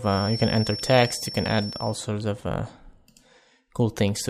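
A feedback whistle runs from 0.0 to 2.0 s: a thin, steady tone at 5.4 kHz sits behind the sound, roughly 10 dB below it, swelling and fading slowly in level before it stops. The likely cause is a loudspeaker-to-microphone loop held just at the edge of feedback, where the loop gain at that one frequency stays high enough to sustain the tone but never climbs far enough for it to build into a runaway howl.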